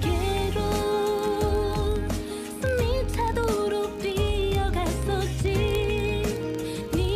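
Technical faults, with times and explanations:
0.12 to 7.15 s, word clock ticks: an unlocked receiver clock, roughly 0.1% off, slips one sample about every 20 ms, giving a rattling buzz; spectrogram shows evenly spaced vertical lines.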